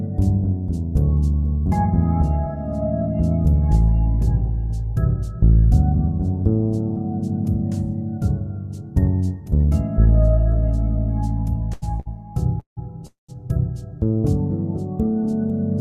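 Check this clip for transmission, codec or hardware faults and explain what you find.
Four network-timing faults cluster between 11.7 and 13.3 s, all delaying the audio without removing any of it.

Short stall from a late packet, at 11.73 s and 12.00 s: a packet missed its playout time and the jitter buffer emptied, so the receiver stretched the last sound for 85 ms and then 60 ms. Each held sound carries a slight buzz or dip before playback resumes where it left off.

Call audio freeze, at 12.60 s and 13.07 s: the likely cause is packets held up in transit long enough to drain the jitter buffer. The receiver continues the last sound as a fading buzz or hiss, then goes silent for about 120 ms and 140 ms. These gaps run about 170 ms and 220 ms in total before the audio picks up from where it stopped.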